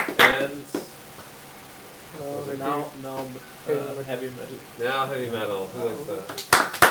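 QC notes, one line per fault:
throughout: low bit depth without dither, likely from truncating to about 7 bits with no dither, so grainy distortion tracks the signal, sitting only about 25 dB down.
throughout: clock drift between sender and receiver, the sender's clock running about two percent slow, so the receiver's buffer keeps draining and must be padded to stay in step.
0.59 to 6.72 s: repeated timing corrections, small repeated pieces at uneven intervals that slow playback to about 97 percent speed, adding around 150 ms in total, heard as faint hiccups and unsteady pacing.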